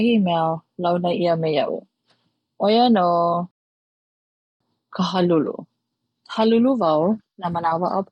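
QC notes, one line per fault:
3.51–4.60 s, rebuffering stall: the speech stops dead into silence for about 1.1 s, then picks up exactly where it left off with nothing skipped. The player ran out of downloaded audio and waited for more, so time is added but nothing is lost.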